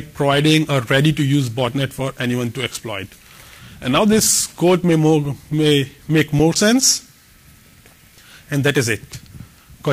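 Nothing in the audio signals a technical problem: the level stays steady, nothing drops out or breaks up, and the sound holds together the whole way.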